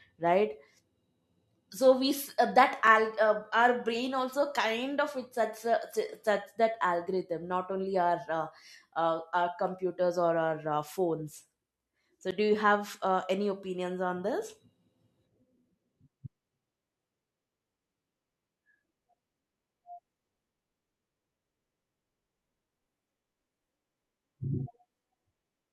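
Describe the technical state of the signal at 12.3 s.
A sharp tick at 12.31 s, just before "do you have uh", is a block of digital silence: about 11 ms of zeroed samples, which fits a 512-sample buffer left unfilled.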